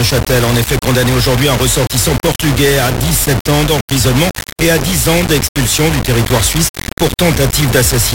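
From start to end the sound is harsh and grainy, with noise almost as loud as the signal. That's likely low bit depth without dither, around 3 bits, rounded.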